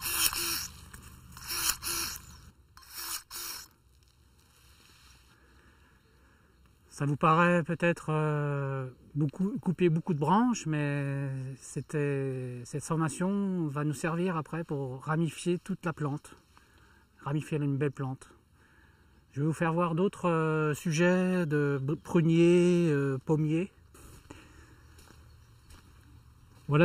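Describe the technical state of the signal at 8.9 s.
Hollow and phasey at 8.9 s, as throughout the clip: channel delay (comb filtering), one channel lagging by under a millisecond, notches starting around 700 Hz.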